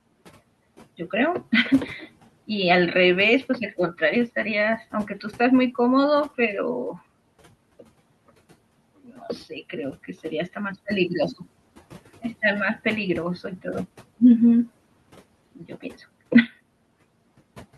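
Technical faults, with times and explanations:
4.92–5.25 s and 15.55–16.03 s, speech cut by the noise suppressor: The suppressor mistook quiet speech for the room noise, about 22 dB below the speech. It pulled the sound down by about 10 dB, then about 13 dB. Roughly a tenth, then a fifth of a second sounds swallowed.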